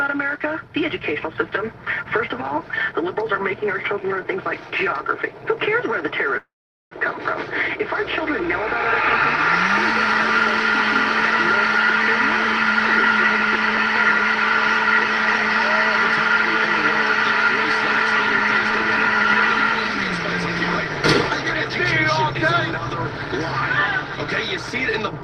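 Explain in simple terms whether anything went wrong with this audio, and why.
At 6.37 s the sound stalls in a call audio freeze that lasts until about 6.93 s. For a moment the last sound is stretched into a fading buzz or hiss, and then there is roughly 0.44 s of silence. When the audio resumes, it picks up exactly where it stopped, so nothing is missing and everything afterward simply arrives about 0.54 s late. That is what separates it from a dropout, which loses part of the audio. The likely cause is network packets arriving late, so the receiver briefly ran out of audio to play.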